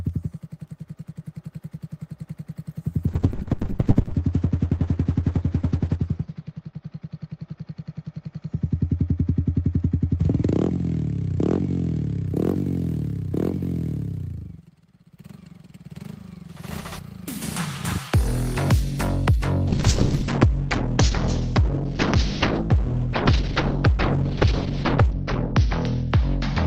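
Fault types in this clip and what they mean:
Call bitrate drop: the call's bandwidth estimate collapsed, forcing the encoder onto far fewer bits, which fits a fall from 32 to about 7 kbps. Twice the sound turns coarse and muffled, its top end cut off near 8 kHz, then 6 kHz.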